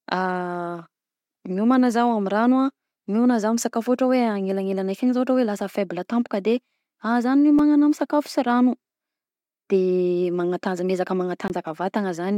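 A sharp tick at 7.59 s, then a slightly fuller pop with a brief hole in the speech at 11.48 s. Both are a block of digital silence: a run of samples replaced by zeros, about 5 ms long the first time and about 20 ms the second. The audio drops straight to zero and jumps back with no fade. The longer second block is just enough to be heard as a tiny gap.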